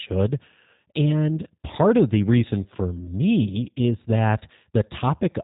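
G.729 codec coding runs from start to finish, and its damage is plainly audible. The speech has been rebuilt from a compact model rather than carried as a waveform. A short-term filter shapes the vocal tract resonances, a pitch predictor supplies the voicing, and a handful of pulses per 5 ms half-frame fill in the rest. That leaves the speech rough and slightly synthetic, and nothing above 4 kHz survives. The sound points to the 8 kbit/s G.729A variant.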